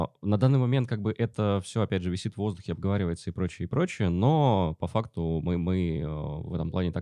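Nothing in the speech recording stands out as a technical fault at any point, and the signal holds steady across its whole duration.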